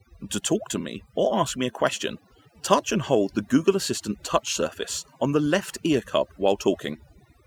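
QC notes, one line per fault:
Throughout: overdone noise removal. Noise reduction on this speech was set too strong. Frequency bands that came near the noise estimate were cut hard or shut off entirely, and the quieter parts of the voice were removed along with the noise. The background now drops, with scattered twinkling specks where isolated bands briefly open and close.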